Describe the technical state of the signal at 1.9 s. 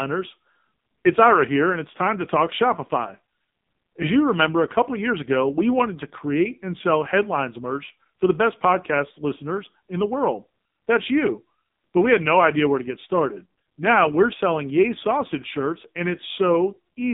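At 1.9 s, as through the whole clip, the speech carries heavy AMR narrowband mobile codec damage: a vocal-tract model rebuilds it from sparse pulses, giving a buzzy, synthetic tone that fits a low mode near 5.9 kbps. Unlike a simple phone-line filter's clean muffling (line band 150 Hz to 3.7 kHz), it also adds that buzz, with nothing above 3.8 kHz.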